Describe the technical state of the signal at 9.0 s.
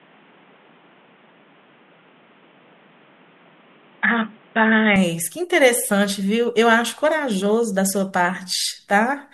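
At 9.0 s the audio is intact, with no dropout, clipping, glitch or other fault present at that point.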